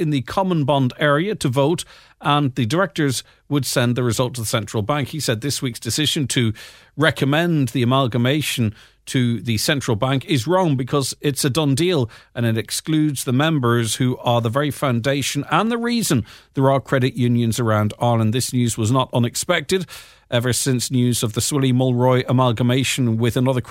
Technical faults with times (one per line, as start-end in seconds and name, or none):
15.67 underrun with held sample